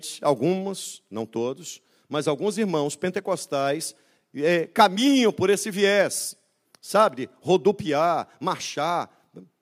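No technical faults can be heard anywhere in this speech recording.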